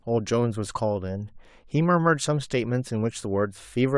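No technical faults can be heard anywhere in the recording, and the signal stays intact throughout.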